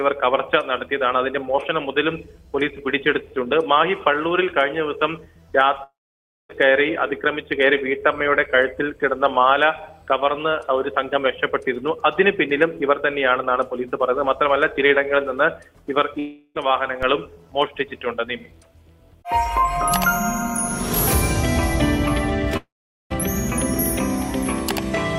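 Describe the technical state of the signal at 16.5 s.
At 16.5 s the signal is inside a long network dropout running from 16.19 to 16.57 s. The sound is replaced by a buzzy, hissy continuation of what came just before, fading over about 355 ms and ending in a brief silence of about 20 ms. Roughly 360 ms of audio never arrived, likely because of an interrupted stream. Unlike a short packet-loss glitch, the gap lasts long enough for the fill to die away, and the audio resumes with that stretch missing.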